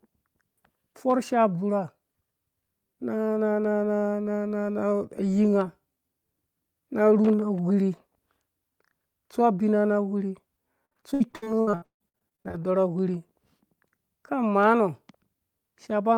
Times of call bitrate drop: none

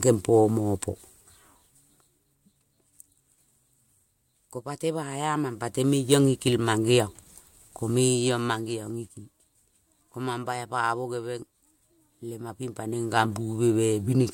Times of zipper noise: 1.04-2.36, 5.00-6.32, 7.88-9.40

